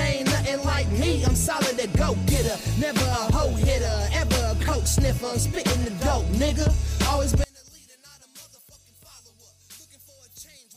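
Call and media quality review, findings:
From 7.44 s to end: sound collapses to a faint residue, about 27 dB down. Likely one channel inverted, cancelling shared content when summed to mono.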